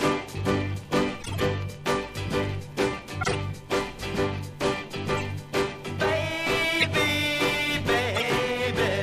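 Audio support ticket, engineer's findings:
Corrupt frame decoded, four bursts: 1.20–1.42 s (about -15 dBFS peak, roughly seven frames), 3.21–3.35 s (about -10 dBFS), 5.18–5.24 s (about -25 dBFS), 6.79–6.84 s (about -10 dBFS). Chirpy noise blips. Decoder accepted bit-flipped frames, misread gains and codes, and placed energy at wrong frequencies.

Compressed frames skipped at 8.14–8.23 s. Roughly 30 ms of audio missing. Whole frames were absent or rejected by the decoder, so playback jumped forward.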